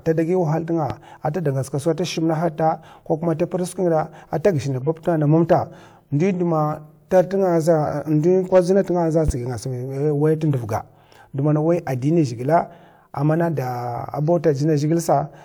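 A voltage spike, likely from a switching transient or static discharge, was added to the speech at 0.90 to 0.93 s and again at 9.28 to 9.31 s. Each time it produces a single sharp loud pop, roughly 10 dB above the speech, which carries on underneath.

A compressed frame with damaged bits was decoded and played at 2.14 to 2.17 s, and two consecutive damaged frames were played at 4.81 to 4.88 s. Misread data put energy at the wrong frequencies, producing brief chirpy bursts of noise. They reach about -25 dBFS and about -20 dBFS respectively.

Peaks exceeding the range of a stage were cut flat, which is hard clipping. At 5.52 s the overdrive is about 2 dB and gives a short crackle. From 8.55 to 8.78 s it is about 3 dB, and the flattened tops add high harmonics heard as crackle on the peaks.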